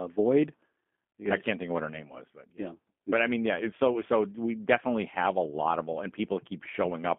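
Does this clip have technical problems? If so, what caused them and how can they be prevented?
Yes. Throughout the clip, the speech was carried by a G.729 codec, which rebuilds each 10 ms frame from a vocal tract model, a pitch predictor and a handful of pulses. The sound fits an 8 kbit/s stream. Nothing remains below 200 Hz or above 3.4 kHz, leaving the speech thin, rough and plainly synthetic. To prevent this, carry the call over a wideband codec such as G.722 or Opus instead of G.729.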